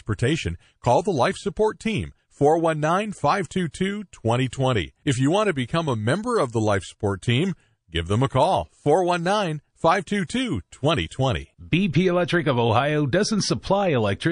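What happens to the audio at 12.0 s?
At 12.0 s the speech is still under the likely MP3 compression heard across the whole clip, starved of bits at a rate that points to about 40 kbps. Treble is cut, and weak frequency lines drop in and out between frames, so the speech sounds watery and swirly, with metallic chirps on s sounds and smeared attacks.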